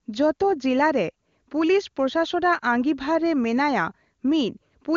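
No technical faults are audible.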